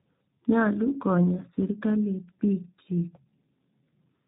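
Throughout the speech, tandem speech coding is audible: the signal passed through G.726 at 32 kbit/s, G.711 A-law, then G.729A at 8 kbit/s, each coder re-encoding the previous one's damage. It sounds rough, muffled and warbly; a spectrogram shows nothing above 3.7 kHz and smeared, blotchy harmonics.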